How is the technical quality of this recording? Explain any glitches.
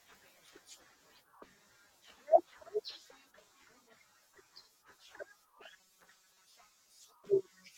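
One glitch affects the recording: robotic sound from repeated short buffers between 5.72 and 6.47 s. The speech turns into a rigid, metallic buzz pitched at 188 Hz, still loosely tracking the words. The likely cause is audio arriving too seldom, so playback loops a chunk of about 5.3 ms, which fits a buffer that short, while roughly half the real signal is skipped. A spectrogram would show evenly spaced horizontal harmonics of 188 Hz; the waveform would show one short shape copied over and over.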